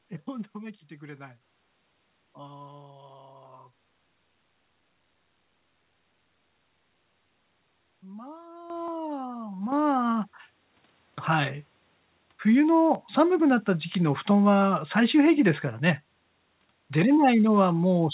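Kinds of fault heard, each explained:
Clock drift buffer slips: A regular click recurs about every 1.36 s from 0.74 s to the end. This is likely two clocks disagreeing by a few hundred parts per million, so the buffer between them periodically drops or repeats a small block of samples.
Microphone volume stepped up: The sound and its background jump louder together at 8.70 s, 9.72 s and 10.74 s, by about 9 dB, 8 dB and 2 dB. The software judged the microphone too quiet and raised the input volume in discrete steps.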